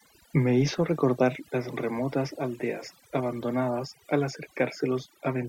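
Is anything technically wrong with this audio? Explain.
Yes. Throughout this speech clip there is overdone noise removal: a noise reducer set too aggressively cuts individual frequency bands whenever they approach its noise estimate, taking quiet vocal detail too. The background drops and breaks up into twinkling specks. On a spectrogram, expect scattered isolated dots between phrases and ragged, hollowed-out harmonics.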